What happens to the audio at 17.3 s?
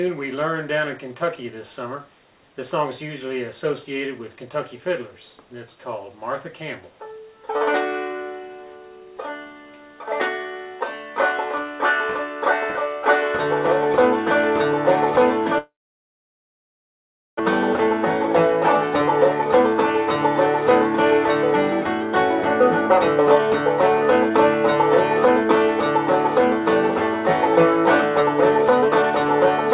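At 17.3 s the audio is still in near-silence near the end of a long network dropout from 15.58 to 17.41 s. The last sound smears into a brief fading buzz, then stays silent for about 1.7 s, likely because packets stopped arriving. Unlike a short packet-loss click, it resumes with about a second of material missing and its timing shifted by well over half a second.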